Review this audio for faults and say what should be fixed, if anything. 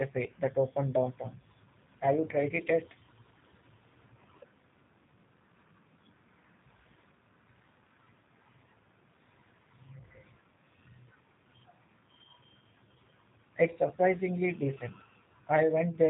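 The speech passed through a G.729 codec path, consistent with 8 kbit/s G.729A, which rebuilds each frame from a vocal tract filter, pitch predictor and a few pulses. Throughout, nothing reaches above 3.8 kHz, and the voice sounds plainly rough and synthetic. Prevent it by routing this call through a wideband codec such as G.722 or Opus.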